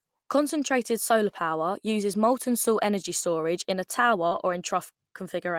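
Just after "energy storage in a", at 4.27 s, there is a short concealed packet loss lasting until 4.33 s. About 40 ms of the stream did not arrive in time, and the decoder covered 36 ms of it by extending the preceding sound, following its pitch where voiced or substituting shaped noise, before crossfading into received audio. It is heard as a brief smear or wobble in the speech.

Overlapping that, from 4.31 s to 4.53 s, comes a lost packet rebuilt from error correction. Across 120 ms the decoder played the low-bitrate redundant copies carried in following packets instead of the originals, which fits six 20 ms Opus frames recovered through in-band forward error correction. There is no gap, but this stretch sounds coarser and noisier than the surrounding speech because the rebuilt frames hold less detail.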